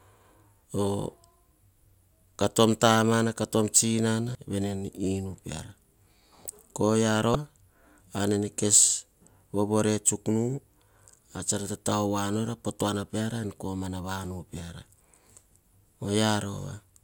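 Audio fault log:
4.32–4.35 s and 7.32–7.35 s: damaged data in a compressed stream. At each point a stretch of the encoded speech arrived corrupted, so the decoder could not interpret those frames correctly, lost its alignment with the frame structure and had to hunt for the next valid header before normal decoding resumed. Each of those 30 ms gaps in coherent data comes out as a brief synthetic blip or chirp cutting across the speech. The two events sit exactly 3 s apart.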